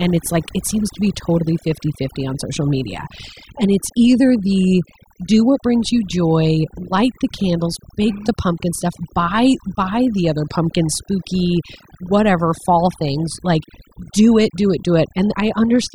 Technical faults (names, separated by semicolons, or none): overdone noise removal